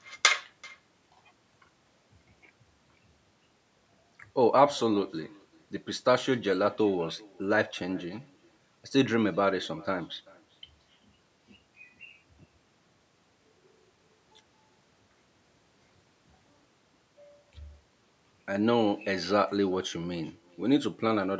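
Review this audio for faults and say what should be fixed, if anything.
Echo with no canceller runs through the whole recording. Each phrase returns roughly 400 ms later, about 25 dB below the speech, as a thin copy. The far end's loudspeaker feeds its microphone, and nothing removes that return before it travels back. Turning on acoustic echo cancellation at the far end, or having that side use headphones, would prevent it.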